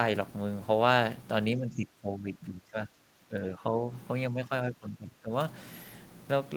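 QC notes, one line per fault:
1.56–3.85 s and 4.3–5.31 s, speech suppressed in double talk: the speech sinks in uneven pieces, by about 15 dB over roughly two seconds in the first span and about 20 dB over well under a second in the second. This is likely an echo canceller turning down the near talker while both sides spoke. Unlike packet-loss dropouts, the dips are irregular level cuts, not clean fixed-length gaps.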